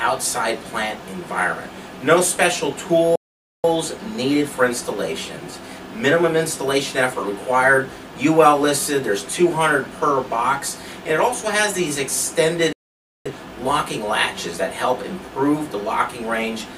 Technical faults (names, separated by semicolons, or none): playback stall